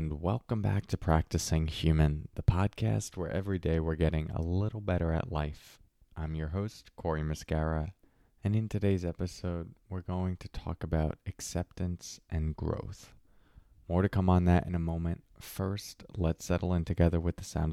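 A listener would find nothing technically wrong with this speech recording, since no dropouts, distortion, noise bursts or other faults can be heard anywhere in it.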